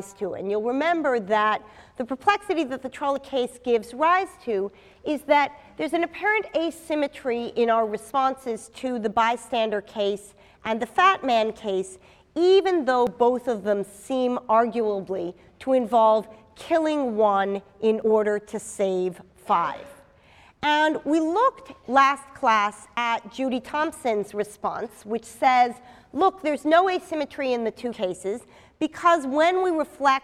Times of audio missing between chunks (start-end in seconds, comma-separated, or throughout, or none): 3.16, 13.07, 18.02, 22.97, 27.92